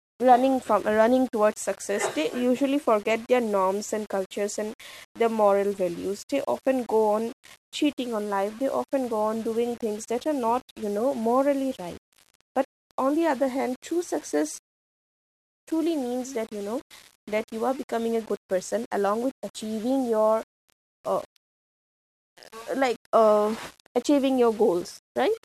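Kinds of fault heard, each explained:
Low bit depth without dither: a grainy, gritty distortion rides on the speech throughout, roughly 25 dB below it, and fades to near silence in pauses. Unlike steady hiss, it follows the signal, which points to likely rounding to about 7 bits with no dither.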